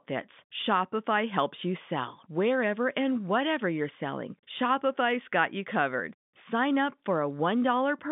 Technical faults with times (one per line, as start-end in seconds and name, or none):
1.40 dropped samples
5.11 dropped samples